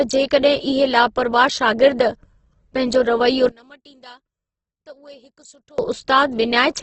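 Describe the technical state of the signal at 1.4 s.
At 1.4 s the speech sounds grainy and rough, with noisy tones and nothing above about 8.2 kHz, a condition that runs the whole clip. This is likely heavy Opus compression in its music mode, refilling starved bands with noise at a rate that fits roughly 12 kbps.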